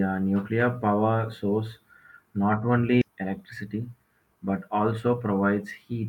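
At 3.01 s roughly a second of speech is lost. That stretch is discarded either in transit or by a jitter buffer that overflowed while later audio was already queued, and playback is pulled forward by about the same amount to catch up. Nothing fills the hole, so this skip ahead sounds like an abrupt jump: the speech on either side of the cut is spliced almost directly together, and a chunk of it simply vanishes.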